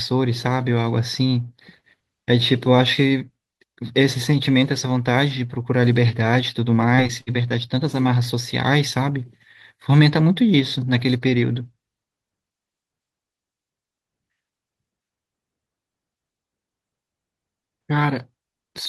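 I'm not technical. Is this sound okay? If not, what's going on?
No. From 6.95 to 7.52 s the speech turns choppy and robotic. This is repeated packet loss. Four small pieces of sound went missing, the longest 58 ms. Each gap was filled by stretching the sound just before it.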